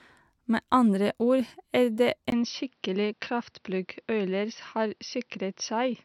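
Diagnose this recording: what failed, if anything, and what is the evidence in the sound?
At 2.30 s, just after "andre ord er det", a 20 ms gap appears and the sound turns boxy until the end: nothing above 6 kHz, new background noise about 45 dB down, level unchanged. A spectrogram shows the top band abruptly cut. Likely cause: the input switched to a poorer device at the driver stage.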